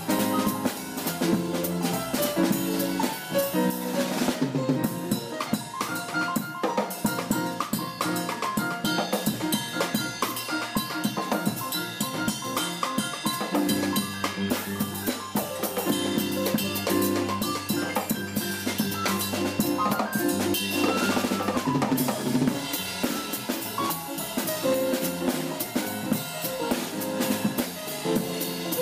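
Lost LE Audio frames occur at 21.54 to 21.56 s and again at 25.65 s. The decoder fills each gap by repeating the last spectrum with randomised signs, producing brief noisy smears of about 15 ms and 7.5 ms, consistent with two frames and one frame.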